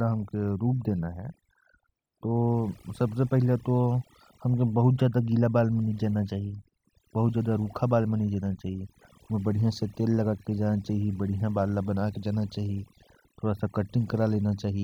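From start to finish, the speech carries overdone noise removal. A noise reducer was pushed too hard on a noisy recording. It cuts individual frequency bands deep whenever they sit close to its noise estimate. Softer parts of the voice fall below that line and vanish too. Between phrases the background drops to near silence, broken by twinkling, warbling specks.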